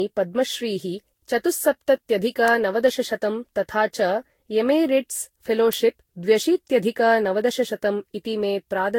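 Throughout the speech, the sound is swirly, hollow and smeared, with blurred consonant onsets and nothing above 16.7 kHz. This is generation loss, likely from around seven lossy passes near 64 kbit/s, each requantising on a shifted frame grid so that noise and spectral gaps accumulate.

At 2.48 s and again at 5.73 s, a sharp, isolated snap sits on top of the speech. These are electrical switching spikes, likely from a nearby switch or discharge arcing briefly and coupling into the audio line.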